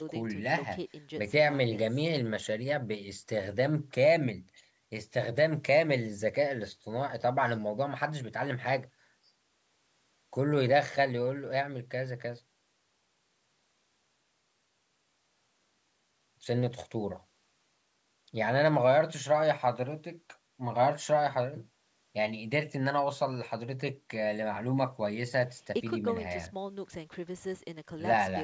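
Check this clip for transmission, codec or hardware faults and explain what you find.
No transmission, codec or hardware faults can be heard in this speech clip. It has passed through a call's microphone processing, which leaves nothing above 8 kHz and trims the lowest bass as that path normally does.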